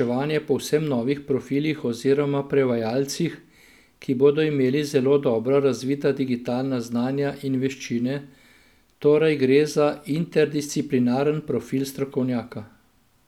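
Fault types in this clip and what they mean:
Nothing wrong turns up anywhere in this speech recording, so there's no fault to list.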